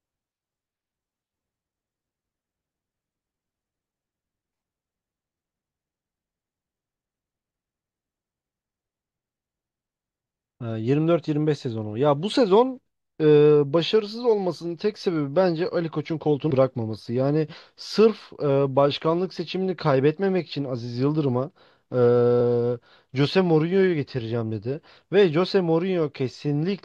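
A speech recording with one skip at 10.61 s. The audio jumps forward, with about a tenth of a second missing and the two sides butted together without silence. This is audio missing between chunks, likely from a recorder handling the sound in 6-second chunks and losing a piece at the changeover.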